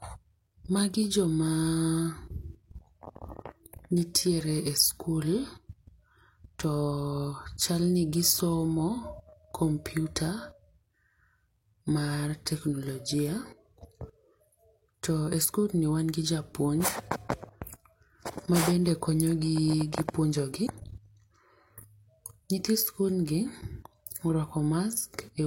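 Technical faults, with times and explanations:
20.62 to 20.70 s, damaged data in a compressed stream: a brief glitch of about 70 ms cuts through the speech, because a stretch of the compressed stream is corrupted and the decoder misreads those frames, loses sync and hunts for the next valid frame header.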